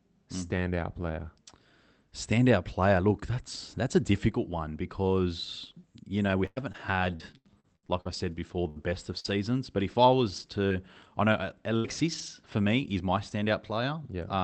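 Repeated packet loss (robotic sound) runs from 6.27 s, just after "difficult one because you", to 12.28 s, ending before "for me is my". Over this six-second stretch, the call path, whose Opus coding limits the top end to about 8 kHz, keeps dropping audio. The receiver fills each hole by stretching the last sound it had. There are over a dozen gaps, the longest 98 ms, and about 10% of the span is patched. The speech turns choppy, with pieces missing.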